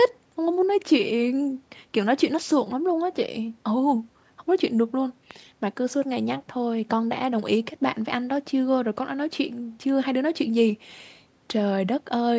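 It's a speech recording with one loud pop at about 5.31 s, a single sharp click lasting roughly 20 ms and peaking a few dB above the speech, which carries on underneath. A pop like this is likely a brief voltage spike from a connector, switch or static discharge. The call microphone processing trims the lowest bass and leaves nothing above 8 kHz.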